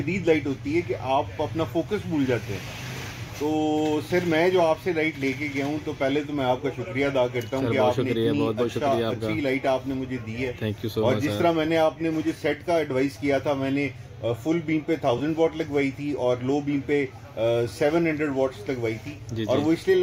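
At 15.18 s there's a short patch of lost LE Audio frames, about 20 ms, likely two frames: the decoder refills the gap with a noisy, smeared copy of the previous sound.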